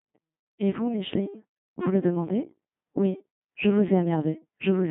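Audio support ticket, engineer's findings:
Robotic, buzzy speech throughout, nothing above 3.9 kHz. Codec 2 vocoder: voice resynthesised from pitch and envelope, heavy damage, consistent with 2.4 kbit/s mode.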